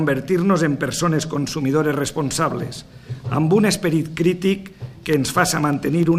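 From 4.83 to 6.13 s, periodic USB or driver dropouts leave tiny silent gaps every 0.1 s, heard as evenly spaced ticks. Their strict regularity distinguishes them from random clicks.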